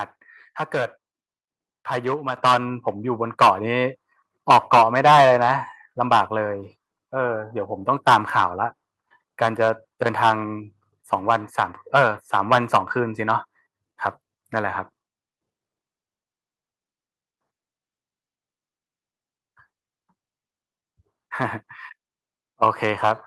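The call software twice judged the microphone too quiet and raised its input volume in a single step: at 2.37 s the microphone volume stepped up by about 6 dB, then again at 3.39 s by about 3 dB. Each time, the speech and the background noise jump louder together.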